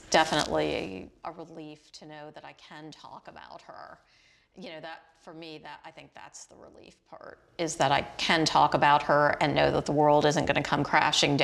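Zipper noise runs from 7.12 to 7.84 s, where a level change of around 20 dB is applied in unsmoothed 1 dB steps, roughly thirty per second, each adding an audible tick.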